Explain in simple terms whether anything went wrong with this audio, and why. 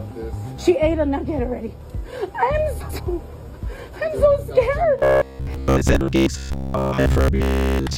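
Frames out of order, from 2.80 to 3.00 s and again at 5.92 to 5.94 s. Two neighbouring chunks of audio, each about 93 ms in the first case and 12 ms in the second, played in swapped order, producing a brief garbled flutter.

Robotic sound from repeated short buffers, from 4.99 s to 7.97 s. The sound turns into a stiff, metallic buzz at about 67 Hz. This is likely because new audio arrived too slowly, so roughly 15 ms pieces were repeated while most of the real audio was skipped.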